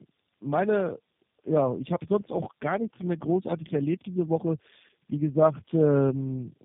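From start to finish the speech sounds rough, muffled and warbly, with nothing above 3.4 kHz. The cause is tandem speech coding: three low-rate speech codecs in a row, consistent with G.729A, AMR-NB, then G.729A again, each recoding the previous one's damage.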